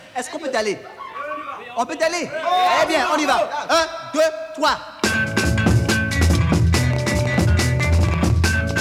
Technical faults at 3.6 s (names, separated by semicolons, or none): none